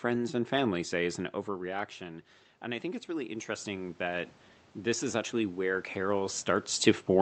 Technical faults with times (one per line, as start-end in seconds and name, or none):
2.61-6.47 automatic gain rising